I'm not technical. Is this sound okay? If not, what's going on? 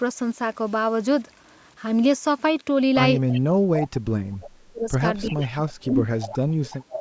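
No. From the start to about 2.5 s the speech is distorted, with noise in the pauses; the likely cause is a stuck bit, one digital bit frozen at a fixed value.

Repeats of the voice, arriving about a third of a second late, appear at about 3.3 s, 5.24 s, 5.84 s, 6.2 s and from 6.65 s to the end. This is echo leak, likely a loudspeaker's sound getting past the echo canceller.

From 3.36 to 4.89 s, from 5.23 to 6.1 s, and from 6.71 s to the end, the voice sinks or drops out. This is speech suppressed in double talk, likely the canceller turning its own talker down along with the echo while both sides spoke.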